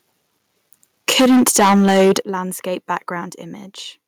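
From 1.08 s to 2.17 s the speech runs into microphone overload. The peaks are flattened against the converter's ceiling, giving the louder syllables a harsh, crackly, gritty edge. The level is pushed roughly 12 dB past the limit, so around a fifth of the samples in that stretch end up squared off. The likely cause is an input gain set too hot for this talker.

Right inside that distorted stretch, at 1.21 s, the microphone volume is stepped down by about 4 dB. You hear voice and room drop together in a single jump, which is the likely work of the call software reacting to the clipping by trimming the device input. It isn't enough to clear the overload, though. At 2.22 s, just after the crackle stops, there's a second, much bigger step down of about 11 dB, and voice and background suddenly drop in level.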